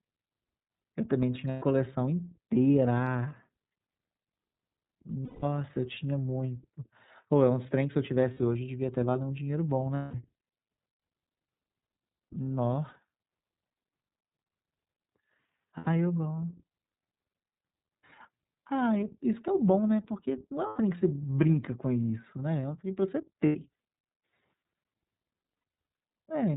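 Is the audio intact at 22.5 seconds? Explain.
No. The iLBC codec runs throughout, including 22.5 s: it codes each 30 ms frame independently and drops everything above 4 kHz, leaving the speech muffled, rough and synthetic, which fits its 13.33 kbps mode.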